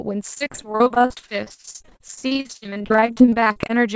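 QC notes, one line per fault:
0.34–3.80 s: repeated packet loss (robotic sound). Dozens of gaps up to 49 ms, 43% of the span filled by stretching prior audio, giving choppy speech with pieces missing.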